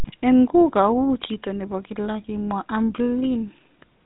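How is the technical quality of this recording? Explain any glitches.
Technical quality is limited by one fault present from start to finish: GSM full-rate codec damage, plainly audible across the whole speech clip.

Throughout, nothing survives above about 3.8 kHz. The codec models the vocal tract and excites it with sparse regular pulses, consistent with the 13 kbps full-rate scheme. That produces a gravelly buzz riding on the voice, unlike simple telephone band-limiting, which only dulls the sound without roughening it.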